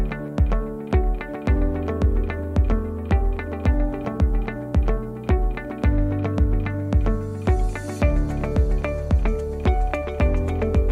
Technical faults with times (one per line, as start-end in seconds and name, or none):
none